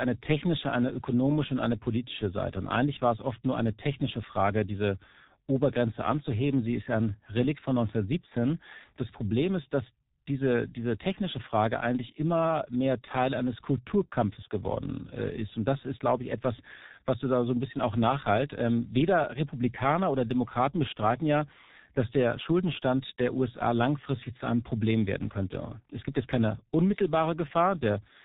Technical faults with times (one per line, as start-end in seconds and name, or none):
0.00-28.24 G.723.1 codec